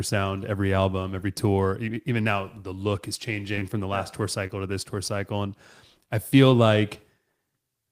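A speech recording with short concealed packet loss in three places. Two gaps sit back to back at 3.55 to 3.59 s and 3.59 to 3.63 s. Together they leave a hole of about 40 ms. A third gap falls at 4.47 to 4.51 s. Each lost stretch is about 20 ms. The decoder covered each hole by extending the preceding sound and then blending back into the real signal. This leaves a brief smear or wobble at each point.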